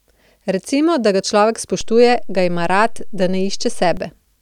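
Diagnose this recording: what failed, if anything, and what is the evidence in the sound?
The fault is a DC step at the converter or analogue input. Right after "da ga človek", at 1.81 s, the waveform's zero line jumps by about -21 dBFS. That shift comes across as a low thump. The offset holds until 3.97 s, where it drops away and gives a second thump. The speech carries straight through both, because a sudden offset shift is heard only at its edges. That points to a converter recalibrating or an offset input being switched in, not anything downstream.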